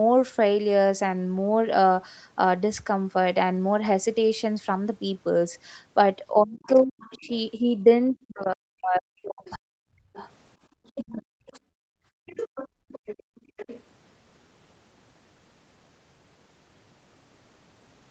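From 6.32 to 11.55 s the talker's speech is pulled down in bursts totalling roughly three seconds, at worst by something like 40 dB. This is speech suppressed in double talk, likely because the echo canceller could not tell the near talker from loudspeaker echo while both sides spoke and attenuated everything. The waveform shows the envelope collapsing in patches, and the spectrogram shows harmonics thinning or vanishing in columns across a band that never extends above 8 kHz.

Overlapping this, the other side's voice is leaking through, probably as residual loudspeaker echo the canceller failed to remove. The first, brief instance runs from 6.65 to 7.28 s, faint and well below the talker. The second, from 9.46 to 13.82 s, is louder, though still clearly beneath the main speech. On a spectrogram it appears as a second, weaker set of harmonic striations that does not follow the talker's pitch contours, sitting in gaps and under the dominant voice.

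Background gated by the echo canceller occurs twice. From 10.68 to 10.72 s the room tone dips by about 12 dB, a 40 ms notch visible as a thin vertical gap in the noise floor. From 11.83 to 13.57 s the gating is heavier, with about 28 dB cut across roughly a second of that span. The room sound drops away and then returns when the canceller releases, showing as a darkened block in the spectrogram's low-level noise and a flattened waveform baseline.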